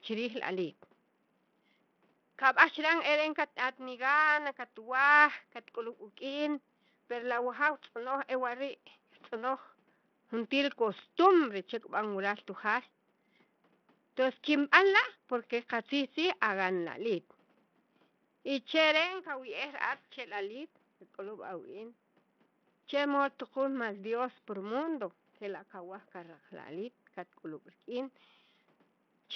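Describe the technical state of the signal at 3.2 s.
At 3.2 s the speech carries heavy Bluetooth SBC compression damage, present throughout the clip and likely from a starved SBC link, its grit fitting roughly 64 kbps. Top sub-bands lose their bits, so treble flickers in and out with gritty aliasing, unlike a clean steady low-pass roll-off. Room noise sits about 42 dB below the speech.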